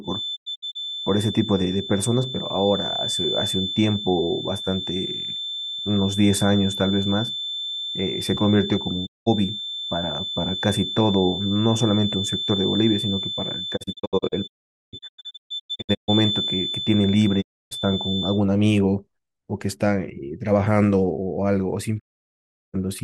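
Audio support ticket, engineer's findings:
Feedback whistle: thin steady 3.5 kHz tone sitting around 10 dB under the speech, 0 to 18.43 s, level wobbling a bit. Likely a speaker-to-mic loop parked right at the edge of howl, ringing on one frequency without running away.

Digital broadcast dropout: speech mutes with quick 20 ms fades at 0.35 to 0.77 s (several short holes, longest about 0.1 s), 9.05 to 9.28 s, 13.76 to 16.10 s (broken up, about 1.3 s gone, longest hole about 0.45 s), 17.40 to 17.73 s and 21.98 to 22.76 s. Receiver losing the signal or failing frame checksums and muting until clean frames return. Hole lengths come in steps that fit 32 ms frames. Missing audio is gone, not delayed.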